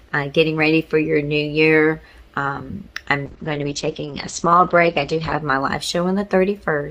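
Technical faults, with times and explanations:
3.3–5.47 s, call bitrate drop: the sound turns rough and muffled, its top end falling from 20 kHz to 8 kHz, worst for 2.1 s. A fallen bandwidth estimate forced far coarser encoding, which fits roughly 64 kbps dropping to 9 kbps.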